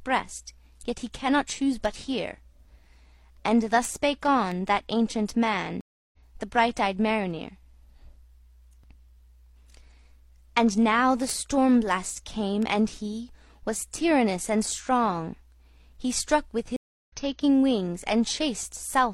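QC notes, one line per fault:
0.52–18.65 s word clock ticks: roughly 30 sharp ticks about every 0.7 s as unlocked clocks slip a single sample, a clock error of about 30 ppm; these appear as thin full-band vertical lines in a spectrogram.
5.81–6.18 s and 16.76–17.17 s stream reconnect: the link dropped and a fresh decoder restarted, leaving gaps of 320 and 317 ms. Audio resumes roughly 0.2 and 0.3 s later, appearing as flat waveform gaps and blank spectrogram columns.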